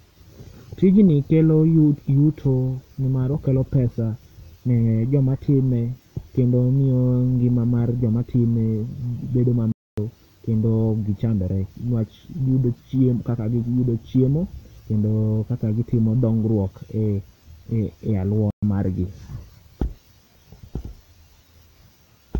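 Speech clip with two playback stalls, where the output drops to silence mid-flow and then resumes: one from 9.72 to 9.98 s (about 255 ms) between "bedo ma" and "kendo oki chandore", and one from 18.51 to 18.63 s (120 ms) just before "mar gi". The likely cause is the player briefly running out of buffered data.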